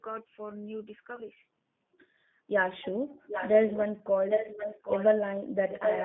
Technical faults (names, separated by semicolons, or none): G.729 codec; VoIP packet loss concealed by the speech codec; echo leak